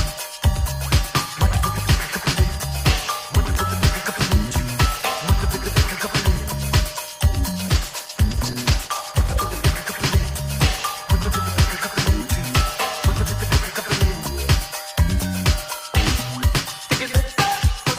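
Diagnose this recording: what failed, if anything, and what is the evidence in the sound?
A call bitrate drop in the call's codec stage. From 7.7 s to 10.21 s the sound turns rough, watery or muffled, consistent with the encoder being cut from 32 kbps to 12 kbps after the bandwidth estimate fell, and held at the lowest rate for about 1.4 s. At that rate Opus quantises coarsely and discards high frequencies. On a spectrogram, the upper band thins or ends abruptly from 7.7 s, with smeared, blocky texture below, and full bandwidth returns after 10.21 s once the bitrate recovers.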